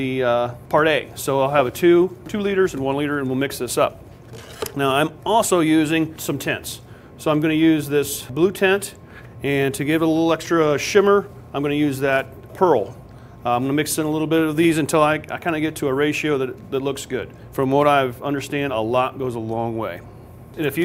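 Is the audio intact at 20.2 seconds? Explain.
Yes, at 20.2 seconds the audio plays through intact, with no dropout, click, distortion or other fault.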